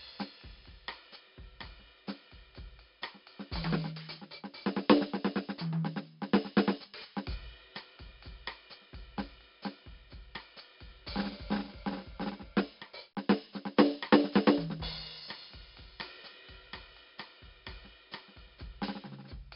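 From start to finish the music carries heavy 4-bit ADPCM compression. Each sample is coded as a coarse step from a predicted value, so the coding error rides along as a gritty hiss that swells with every loud passage. Sharp attacks distort where the adaptive step lags behind. Nothing survives above 5.3 kHz, which dulls the top end and fits a rate around 44 kbps. A spectrogram shows a hard ceiling at 5.3 kHz, with broadband noise rising and falling alongside the level.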